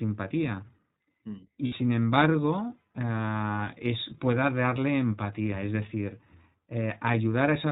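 From start to finish the speech carries plainly audible iLBC codec damage. Everything above 4 kHz is gone, so it sounds narrowband and boxed-in, and there's a rough, slightly synthetic edge because each frame's excitation is coded on its own rather than built from the frame before. The 20 ms framing and overall character fit iLBC's 15.2 kbps mode.

From about 1.66 to 1.75 s there's a burst of lost iLBC frames, roughly 60 ms of missing audio, which fits three lost 20 ms frames. The decoder covers the hole by repeating the last pitch cycle blended with noise, so you hear a short held, faintly buzzy vowel sound in place of the real speech. Since iLBC frames stand alone, the speech snaps back cleanly right after the gap.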